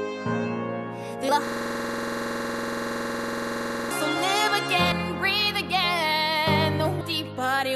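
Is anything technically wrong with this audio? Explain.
Yes, there are two kinds of fault. Compressed frames are skipped at 1.28, 4.91 and 7.00 s. The audio jumps ahead by whole 26.1 ms frames: roughly twenty frames, about half a second, at the first and last points, and about ten at the middle one. The frames were lost or rejected by the decoder.

A system hang loop runs from 1.47 to 3.91 s. One 46.44 ms piece of audio repeats exactly 52 times while the output keeps cycling a stalled ring buffer, which fits a 2048-sample buffer. At 21.5 Hz it sounds like a rattling, machine-gun stutter. Unlike a skip, the same fragment is simply replayed.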